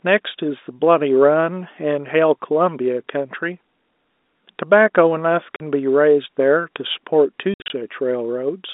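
Packet loss filled with silence: audio packets failed to arrive, and the receiver inserted digital silence in their place. The speech drops out abruptly at 5.56 s for 40 ms, and again between 7.54 and 7.70 s, where 120 ms goes missing in more than one hole, the longest 60 ms. The gap lengths fit 20 ms packets. Each hole starts and stops with a hard edge, heard through the narrow telephone band of the G.711 line.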